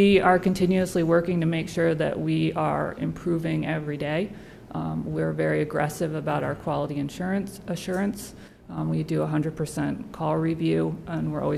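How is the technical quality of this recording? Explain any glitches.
The recording has one glitch. From 8.48 to 8.78 s the level drops abruptly by about 6 dB, likely because one stereo channel drops out and the mono sum loses half its shared content. A waveform shows a sudden halved-amplitude step; a spectrogram shows a uniformly dimmer band across all frequencies.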